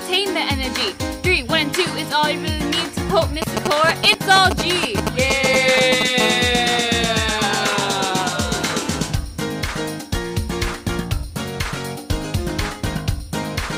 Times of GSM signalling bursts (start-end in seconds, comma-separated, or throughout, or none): 3.42-6.03